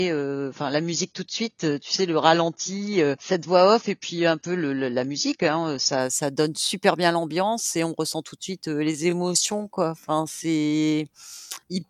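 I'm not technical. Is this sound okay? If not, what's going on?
No. For the first 6 seconds, this is an adaptive stream starting at a low bitrate. The player began on a thin, economical version of the stream so playback could start quickly, then switched to a better one once it knew the connection could cope. Until 6.0 s nothing above about 7 kHz comes through, so the sound is dull and gritty. It then turns crisp in an instant, with no silence or skip. That sudden clean step, rather than a dropout or a gradual change, marks it as a stream switching quality and not a damaged recording.

From 8.9 s to the end there is a time-stretched section. The pace suddenly drops to about two-thirds of normal, yet the pitch stays where it was, so the voice doesn't sound deeper. Instead short slices are repeated to fill the extra time. A player running slow would also lower the pitch. Here only the speed changes, so this is likely software stretching the audio to fit a set length.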